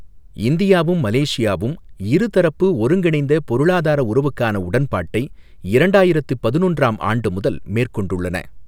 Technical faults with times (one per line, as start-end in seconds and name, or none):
none